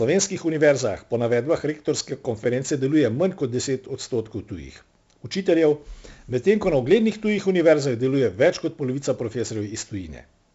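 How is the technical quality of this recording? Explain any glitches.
The quality takes a real hit from one problem that runs the whole way through. It's 4-bit ADPCM compression, from start to finish. Each sample is stored as a coarse 4-bit jump from a predicted value, with the step size adapting as it goes. The damage here is heavy: a gritty hiss riding on every loud stretch of speech and some crunch on sharp onsets. Nothing above about 7.7 kHz survives, which points to a low sample rate and a rate around 64 kbps.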